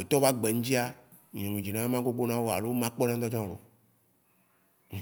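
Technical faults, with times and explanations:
No technical faults are present in this speech recording, and the signal holds together with nothing to flag at any point.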